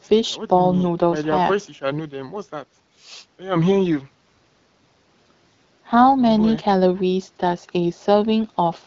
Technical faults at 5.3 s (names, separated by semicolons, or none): none